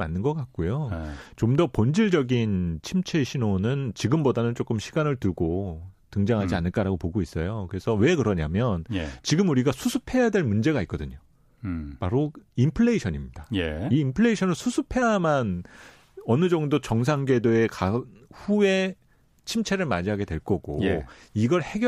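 Nothing in this speech recording stood out as a technical problem on listening.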